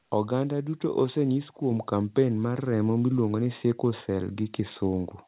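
It's a speech clip where the microphone volume gets stepped up twice: about 4 dB at 1.71 s, between "duto osenyis" and "kampen mar remo miluongo", then about 2 dB at 2.73 s, right after "kampen mar". Voice and background jump together, so it's the input gain being raised in one step, not the talker. The narrowband call sound, with nothing above 4 kHz, fits G.711 A-law.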